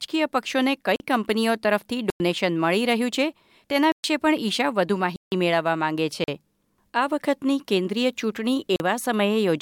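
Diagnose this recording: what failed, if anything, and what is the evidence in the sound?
Blocks of digital silence occur at 0.96–1.00 s (40 ms), 2.10–2.20 s (99 ms), 3.92–4.04 s (120 ms), 5.16–5.32 s (160 ms), 6.24–6.28 s (40 ms) and 8.76–8.80 s (40 ms). Each one cuts the speech out and back with no fade. The longer ones are audible holes. This points to the driver or buffer stage failing to fill the output buffer in time.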